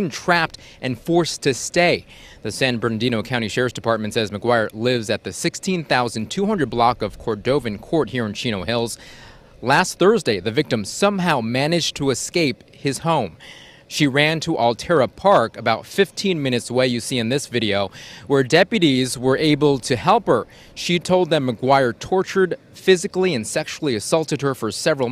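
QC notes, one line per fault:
No faults found on this pass; nothing to log.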